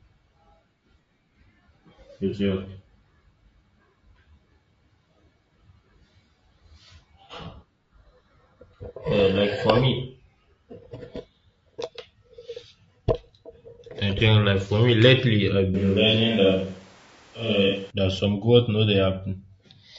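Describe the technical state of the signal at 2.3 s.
At 2.30 to 2.35 s there's AAC frame loss with concealment: one frame's worth of audio went missing, and the decoder patched it from the previous spectrum, leaving a brief smeared, noisy blip. Under that, the speech carries a plainly rough, grainy low-delay AAC compression sound, likely AAC-ELD at a bitrate somewhere around 32 kbps.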